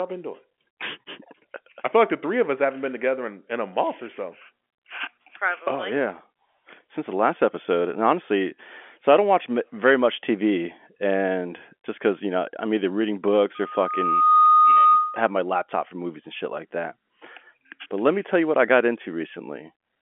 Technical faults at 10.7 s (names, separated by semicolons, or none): none